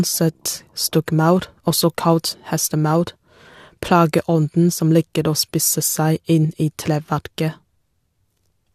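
No technical faults can be heard anywhere in this speech recording.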